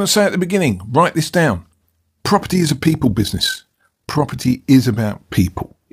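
Windowed frames of this speech recording were overlap-added with a mismatched overlap, so gain no longer sums flat. Between 2.44 and 4.63 s this overlap-add ripple pumps the level by about 6 dB, around 40 times a second, giving a rough flutter.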